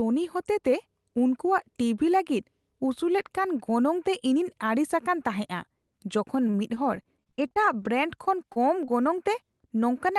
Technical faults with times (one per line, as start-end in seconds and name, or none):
6.47-7.87 repeated packet loss (robotic sound)
8.25-8.28 short stall from a late packet
8.52-8.58 short concealed packet loss
8.86-8.90 short concealed packet loss